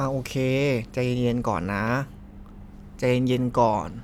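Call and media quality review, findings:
No faults found in the speech recording. Nothing to attribute to any capture, transport or playback component.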